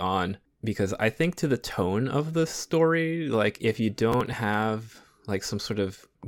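From 4.12 to 4.38 s, just after "story like if you", the speech breaks into a short burst of gritty crackle. This is processor overload crackle. The processor failed to deliver a run of small buffers on time, around seven of them. Each missed block was skipped outright, leaving a tiny hard-edged gap of a few milliseconds, which fits a buffer of roughly 3 ms. Strung together, the gaps tear the sound for about a quarter of a second before it runs clean again.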